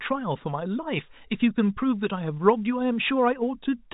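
No faults are present in this speech clip; the G.711 telephone coding is audible as a band limit with nothing above about 3.8 kHz.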